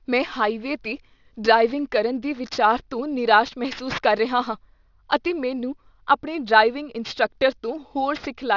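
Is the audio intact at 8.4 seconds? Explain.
No. At 8.4 s, as throughout, sibilants sound gritty and metallic: aliasing, likely from downsampling to 12 kHz without filtering, folds content above 6 kHz back down, roughly 20 dB below the speech.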